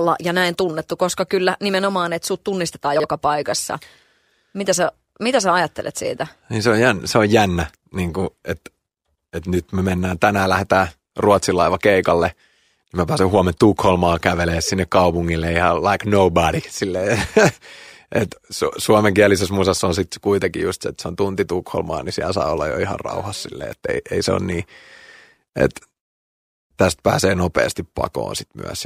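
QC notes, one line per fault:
2.96–3.04 s, chunks out of order: just after "nimenomaan että sut tunnistetaan", an 80 ms stretch of speech comes out jumbled. The sound points to one 40 ms chunk arriving late and playing after the chunk that should follow it. No audio is missing, but the swapped order creates three hard discontinuities and briefly jumbles the speech.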